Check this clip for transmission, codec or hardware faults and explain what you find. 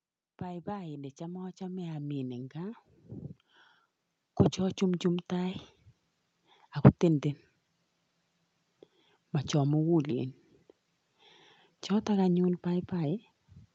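The speech shows automatic gain rising twice, from 0.4 to 2.91 s and again from 4.56 to 5.67 s. The automatic gain control judged the input too quiet and stepped its gain up gradually, about 12 dB in the first stretch and about 4 dB in the second, so the voice and the background noise swell together. On a waveform the envelope visibly widens across each span. On a spectrogram every band brightens at once, up to the limit near 8 kHz left by the call path.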